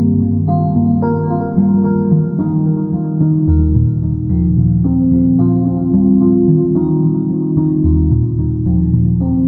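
Channel delay (comb filtering) runs throughout these everyday sounds. One channel arrives a fraction of a millisecond late, and when both are summed to mono, shared content cancels at evenly spaced frequencies from around 3 kHz upward, leaving a hollow, phasey sound.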